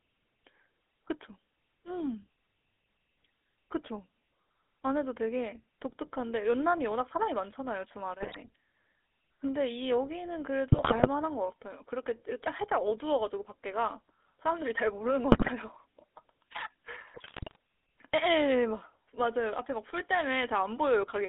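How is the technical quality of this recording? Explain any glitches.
The quality is poor: the whole recording carries narrowband GSM full-rate codec coloration, and four short bursts of GSM bit errors break it up.

GSM full-rate codec, throughout: the speech is squeezed into roughly 300 Hz to 3.6 kHz, consistent with 13 kbps full-rate coding. Sparse pulse excitation through a vocal-tract filter gives a buzzy, gravelly roughness. A spectrogram shows a hard ceiling near 3.6 kHz and thin low end.

GSM bit errors, at 8.22–8.37 s, 10.72–11.08 s, 15.32–15.50 s and 17.14–17.56 s: corrupted filter, pitch and gain parameters make the decoder produce wrong frames, heard as squawks, pops and gargling. The waveform shows sudden level spikes, and the spectrogram shows smeared, distorted frame-length blocks.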